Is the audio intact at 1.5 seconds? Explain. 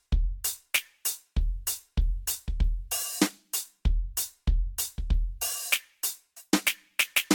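No, generation loss runs throughout, including 1.5 s: likely from repeated lossy re-encoding, roughly seven passes near 66 kbit/s, leaving the music swirly, hollow, with blurred attacks.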